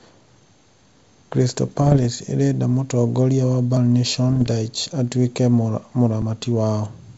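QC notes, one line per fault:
1.32, 3.77 and 6.22 s: audio missing between chunks. The sound skips forward with no silence in between. At 3.77 s the skip falls just after "ĩrenda mũtongoria wa". Each jump removes roughly a twentieth of a second. The gaps repeat every 2.5 s, so the likely cause is a recorder or processor working in 2.5 s chunks and dropping a short piece at each handover. The two edges are butted together, so each skip lands abruptly.
1.66 to 2.06 s and 4.29 to 4.52 s: bit errors on an ADPCM link. These are pops and rough, grainy bursts with brief jumps in level. The first run ends just before "ĩrenda mũtongoria wa". Around half a percent to under one percent of bits are flipped in the wideband G.722 stream, which otherwise carries speech clearly up to 7 kHz. Each flipped bit also upsets the decoder's step size and prediction. The damage therefore rings on for several milliseconds rather than staying a single tick.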